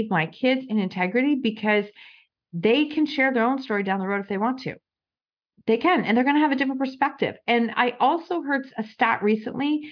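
No technical faults can be heard anywhere in the recording.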